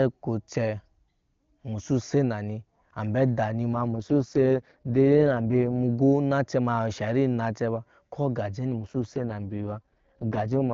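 From 3.73 to 5.79 s, and again from 8.78 s to the end, the speech turns rough, raspy and synthetic without losing bandwidth or dropping out. This is an AMR rate drop: the AMR-WB link falls back to its lowest coding rates, consistent with roughly 23.85 down to 6.6 kbit/s.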